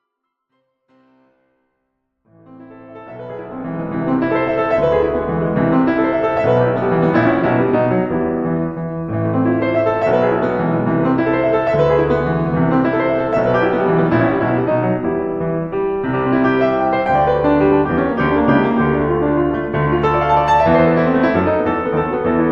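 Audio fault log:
Nothing to flag in this music, just a gentle fade-in from the very beginning that reaches full level at around 4.2 s.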